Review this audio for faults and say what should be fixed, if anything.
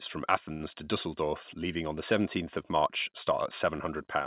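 A short stall from a late packet: at 0.52 s a packet missed its slot, the jitter buffer ran empty, and the receiver stretched the last sound until 0.62 s (77 ms) before resuming. Nothing is lost, but the sound is held too long with a slight buzz or dip, and playback runs 77 ms later afterwards.

A slightly deeper or adaptive jitter buffer would absorb a packet this late before it runs dry.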